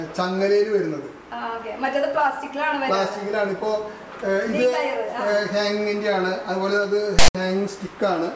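At 7.19 s a short burst of file tags played as audio cuts in for about 0.16 s until 7.35 s. Text bytes are read as samples, giving a loud rasp offset to one side, then zero padding drops to silence. The waveform shows hard-edged blocks, and the spectrogram shows a broadband smear followed by blank.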